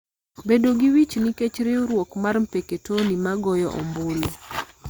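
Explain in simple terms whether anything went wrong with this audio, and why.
Nothing went wrong here: the speech recording comes through as a steady, intact signal with no technical faults to point to.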